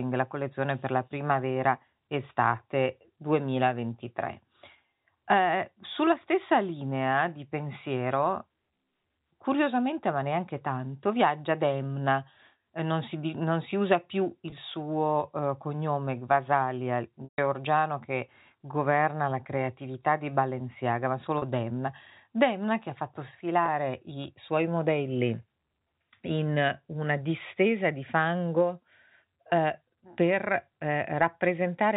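Packet loss with pitch repetition strikes the speech four times. At each gap the receiver bridged the missing audio by repeating the last pitch period. The brief drops at 14.50–14.52 s, 21.38–21.42 s and 23.66–23.68 s, each 20 to 40 ms long, fit one or two lost 20 ms packets and come across as a slightly held, buzzy instant. The 140 ms loss at 17.24–17.38 s runs long enough for the repeated period to fade toward silence before the speech cross-fades back in. The band-limited G.711 telephone sound around these gaps stays steady.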